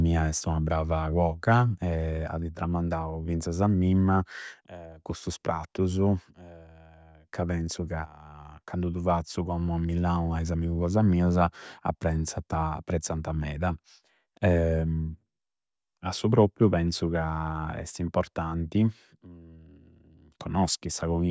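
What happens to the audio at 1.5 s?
Nothing goes wrong at 1.5 s; the speech there plays through intact, with no dropout, click, distortion or other fault.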